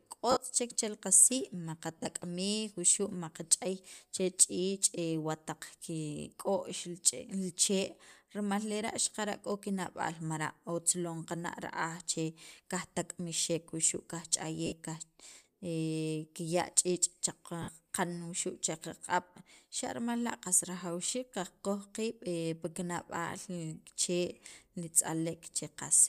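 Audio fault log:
0.31, 1.98, 14.66, 17.62 s: lost LE Audio frames. About 50 to 60 ms gaps (scattered at 1.98 s) get filled by a repeated, sign-randomised spectrum, so the sound briefly becomes a noisy smear.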